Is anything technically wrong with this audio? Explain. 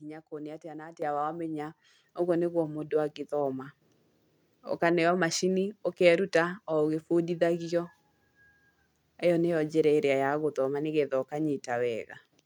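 Yes. The speech has two microphone volume steps. At 1.02 s, just before "wathoma ũguo nĩguo mũndũ", the level jumps by about 8 dB. At 2.04 s, just before "ũguo nĩguo mũndũ angĩthoma", it rises again by about 5 dB. Each time the call software judged the microphone too quiet and raised the device's input gain in a single step. The voice and the background noise get louder together, abruptly, with no gradual ramp.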